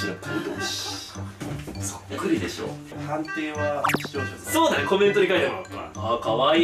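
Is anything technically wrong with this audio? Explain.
No, nothing is technically wrong with this audio.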